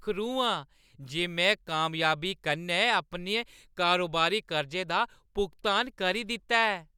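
No technical faults are audible.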